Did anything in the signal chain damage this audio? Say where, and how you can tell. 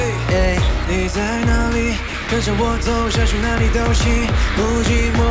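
Yes. Twice in quick succession the sound cuts out and a flat, steady hiss takes its place: from 2.08 to 2.14 s and again from 2.22 to 2.28 s, each gap 60 ms long before the signal returns. This points to the call-processing stage, most likely sound dropped by the voice detector. The sender treated those moments as background and stopped transmitting, and the receiver filled the gaps with comfort noise. The G.722 call path itself leaves nothing above 8 kHz.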